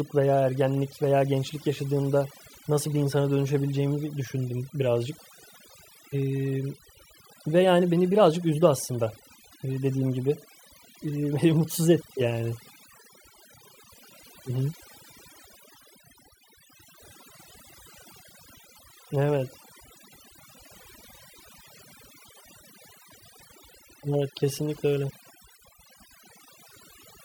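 Throughout the speech, the background collapses into near silence dotted with twinkling specks. This is overdone noise removal: a noise reducer pushed too hard keeps switching off frequency bands near its noise estimate, taking quieter voice detail too.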